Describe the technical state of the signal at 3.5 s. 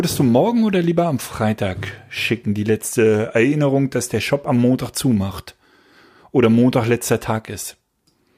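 At 3.5 s the speech signal is intact, with no dropout, clipping, glitch or other fault.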